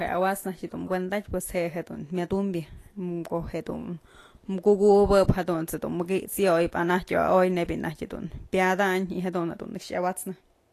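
Throughout the speech, the encoding has most likely passed through Vorbis compression at a low quality setting, where the codec codes a smooth outline of the spectrum with a quantised residue on top and quantises the treble so coarsely that detail is replaced by noise of similar energy. Nothing is left above 14.2 kHz, and the codec damage is plainly audible: the high end turns hissy and grainy, tones sound roughened, and attacks blur. This fits a bitrate in the region of 36 kbps.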